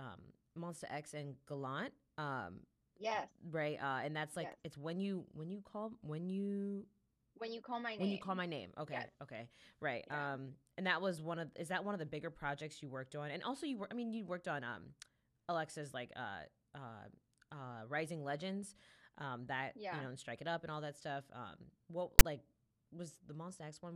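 File tags played as audio at 22.19 s in this speech clip: a block of text metadata is decoded as if it were sample data, giving a brief, hard-edged burst of loud rasp pushed to one side of the waveform, since text bytes never form a balanced signal.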